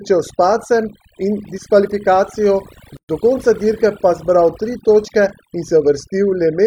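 Overdone noise removal runs throughout the speech. Bands near the noise estimate are cut away, leaving near-silent background with twinkling specks.

At 2.97 s, after "s padcem in diskvalifikacijo", there is a gap at a join of encoded pieces. Leftover encoder padding leaves a 123 ms gap with smeared edges. Then "do konca dirke pa" continues.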